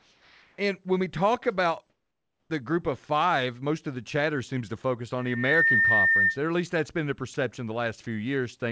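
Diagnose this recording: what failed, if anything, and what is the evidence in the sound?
In the call processing stage, discontinuous transmission likely stopped the sender between sounds, so the receiver played comfort noise. From 0.00 to 0.58 s and from 1.90 to 2.50 s, the real background gives way to a flat, featureless hiss, about 3 dB and about 10 dB quieter respectively.

Also in call processing, the voice detector likely reacted late to the sound returning at the end of the second gap. From 2.47 to 2.50 s the start was not transmitted and the receiver filled it with comfort noise, so the sound begins abruptly with its soft attack cut off.

At the analogue acoustic stage, a microphone heard the loudspeaker it feeds, and the loop gain rose above one at 1.8 kHz. From 5.18 to 6.39 s a single tone swells over a few tenths of a second into a squeal about 5 dB above the sound.

In call processing, the voice detector briefly mistook part of the sound for background and stopped sending. 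From 7.34 to 7.36 s the sound is replaced by a short patch of comfort noise, likely because of this, within a band that stops at 8 kHz, which fits a G.722 call path.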